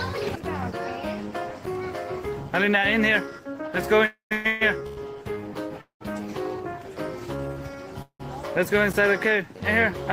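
Packets were likely delayed in transit and the jitter buffer ran dry, causing a call audio freeze at 4.05–4.33, 4.33–4.47, 4.47–4.63, 4.87–4.99, 5.81–6.02 and 8.02–8.21 s. The last sound is stretched into a fading buzz, dropping to silence in the first, fifth and sixth. The audio then resumes where it stopped, so about 100–250 ms is inserted each time with nothing lost. From 6.79 to 7.77 s the receiver rebuilt its reserve through a jitter buffer slow-down, repeating small slices to add about 116 ms. That stretch plays at 89% speed with unchanged pitch, so sounds drag. At 8.93 s the output buffer was probably not filled in time, leaving a 10 ms block of digital silence with hard edges that is heard as a tick or dip.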